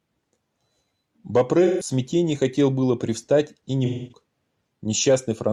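AAC frame loss with concealment smears the speech from 1.63 to 1.90 s, just before "хотел было привстать и", and again from 3.85 to 4.21 s, after "было привстать и не". The decoder replays the last good spectrum, leaving noisy, phasey patches that show as blurred, flattened harmonics on a spectrogram.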